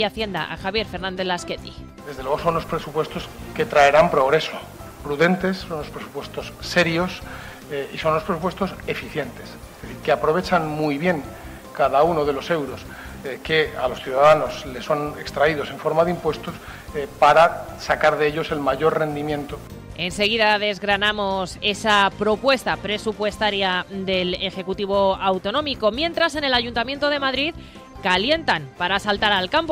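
No technical faults can be heard anywhere in the clip. Nothing in the sound calls for a time stamp or any further comment.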